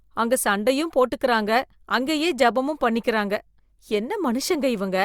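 Nothing stood out on listening to this speech recording.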